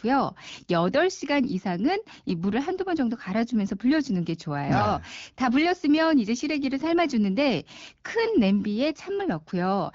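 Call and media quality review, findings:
Nothing to log on this one: the speech comes through the AMR wideband (HD Voice) codec at 12.65 kbit/s, a rate where that codec keeps speech clear.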